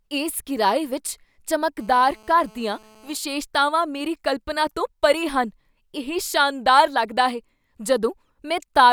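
From 1.81 to 3.16 s, a GSM phone buzz sits under the speech. A 2G handset nearby was on a call, sending radio bursts about 217 times a second. The audio circuit rectified those pulses into sound. The result is a hard, raspy buzz at 217 Hz, thick with harmonics. It holds steady for the whole stretch, with no link to the speech. It runs about 30 dB below the speech level.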